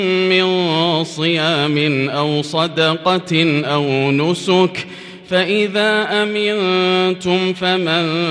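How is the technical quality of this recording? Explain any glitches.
Nothing in the recording stood out as a technical problem on listening, and there are no glitches to explain.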